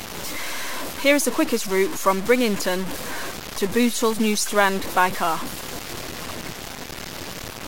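From start to finish the speech sounds grainy and gritty, with distortion that tracks the level and quiet stretches breaking up or dropping out. That's likely low bit depth without dither: truncation to roughly 5 bits, leaving error only about 10 dB below the speech.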